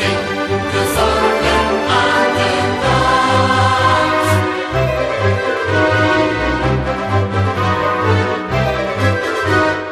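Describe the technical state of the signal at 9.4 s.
At 9.4 s the signal is intact, with no dropout, distortion, glitch or other technical fault.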